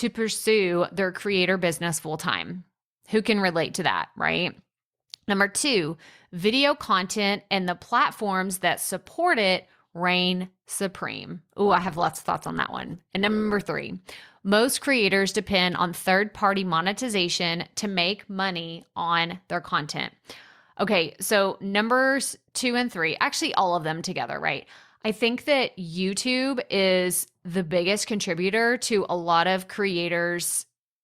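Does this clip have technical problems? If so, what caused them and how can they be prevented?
Yes. From 11.66 to 13.66 s the speech suddenly degrades with codec artefacts and no gap: an adaptive stream at a lower bitrate, dropping from about 64 to 16 kbit/s Opus. Keeping enough network headroom or a larger playback buffer would prevent the switch.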